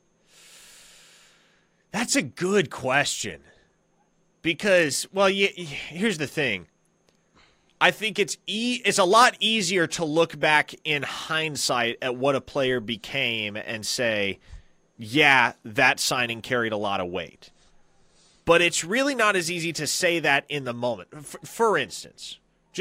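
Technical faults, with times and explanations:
No technical faults are audible anywhere in the speech.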